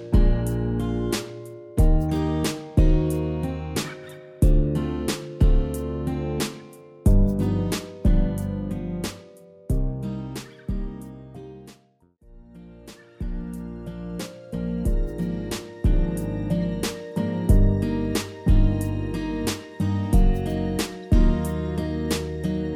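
At 6.60 s a corrupt frame was decoded. Bits in a couple of compressed frames were flipped, and the decoder played them anyway, misreading gains and codes so energy landed at the wrong frequencies. The result is a brief, faint chirp, squeak, blip or burst of noise, peaking around -40 dBFS.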